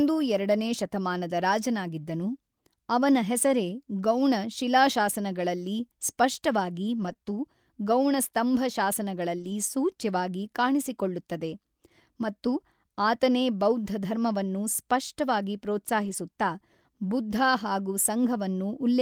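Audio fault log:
4.17–4.19, 6.97–7.25, 8.54–8.56, 9.38–9.52 (just before "ಸೂಚ್ಯವಾಗಿ ಕಾಣಿಸಿಕೊಳ್ಳುತ್ತದೆ"), 16.04–16.14 (just after "ಮತ್ತು ಆತನೇ ಬೌದ್ಧಧರ್ಮವನ್ನು ಸ್ಪಷ್ಟವಾಗಿ"): lost packet rebuilt from error correction. Lost stretches of 20, 80, 20, 80 and 60 ms were replaced by the low-bitrate copy carried in the following packet, so there is no gap. The sound turns briefly rougher and noisier. On a spectrogram these spans look grainier with blurred harmonic detail, while the waveform stays continuous.
7.13–7.17 (after "ಶಿಲಾಶಾಸನಗಳಲ್ಲಿ ಸ್ಪಷ್ಟವಾಗಿ"): short concealed packet loss. About 20 ms never arrived in time, and the decoder extended the preceding sound for roughly 11 ms before blending back, which produces a quick smear or wobble.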